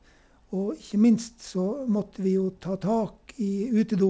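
No technical faults can be heard in this speech clip. It has passed through a call path working as intended, with nothing above 8 kHz, which fits a wideband call codec such as G.722.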